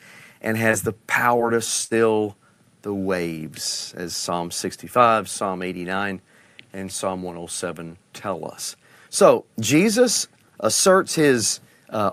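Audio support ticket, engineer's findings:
Brief smears at 0.71 to 0.75 s and 1.37 to 1.41 s. Short concealed packet loss: about 20 ms each failed to arrive in time, and the jitter buffer/decoder concealment extended the preceding sound before crossfading back into the real signal.

Held sound fading out at 1.85 to 1.93 s, then the audio resumes further on. Burst of packet loss: about 60 ms lost in a row. The receiver extended the last sound and attenuated it, so that stretch of the stream is gone.

Single sharp click at 10.87 s. Dropped samples, likely a fraction of a millisecond missing in the capture or playback buffer handling, so the waveform jumps between non-adjacent values. The gap is too short to remove audible content.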